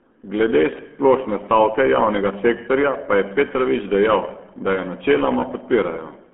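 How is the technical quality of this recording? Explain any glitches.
Technical quality is poor, with one fault present for the entire recording: the RealAudio 14.4 codec. The speech is confined to roughly a telephone band of 200 Hz to 3.4 kHz, and nothing reaches above 3.8 kHz. The heavy damage points to an 8 kbit/s dial-up speech coder, which discards most spectral detail and rebuilds the signal from a coarse model. The speech therefore sounds muffled and gargly, with consonants smeared and a watery, artificial texture.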